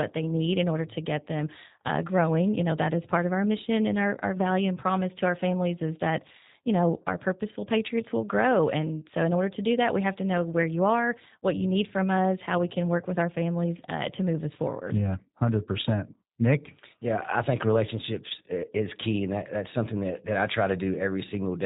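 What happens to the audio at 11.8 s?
At 11.8 s the speech carries G.729 codec damage that runs through the whole clip: it is cut off above 4 kHz and rebuilt from a vocal-tract model at a rate suggesting 8 kbit/s, so it sounds rough and synthetic.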